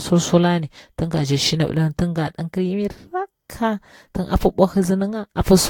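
A speech recording that sounds swirly, smeared and hollow throughout, with consonant attacks blurred and a watery texture on the voice, and nothing above about 19.2 kHz. This is generation loss, most likely from the audio being decoded and re-encoded around five times with a lossy codec such as Vorbis at roughly 70 kbit/s. Each pass requantises on a shifted frame grid, so noise and spectral holes accumulate.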